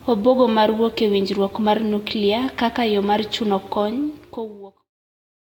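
Throughout the speech, generation loss sounds swirly, hollow and smeared, with blurred attacks. This is likely from about four Vorbis re-encodes near 70 kbit/s. A spectrogram shows scattered holes and nothing above 18.7 kHz, continuing into the smooth fade-out that ends at 4.92 s.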